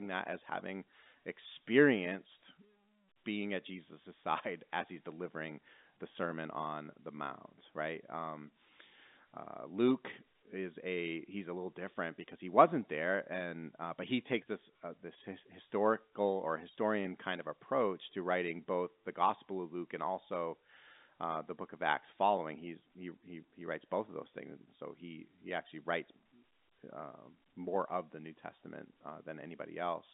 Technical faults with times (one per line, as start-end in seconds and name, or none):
none